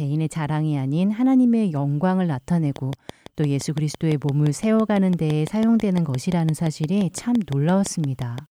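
A train of clicks runs from 2.76 s to 8.39 s, through to nearly the end of the speech. Some outside source is injecting a pulse about 5.9 times a second at an even, regular spacing, around thirty clicks in all, each much the same in shape. The likely cause is interference from nearby equipment or a faulty connection or power supply. The clicks peak a few decibels above the speech and keep ticking through the pauses as well.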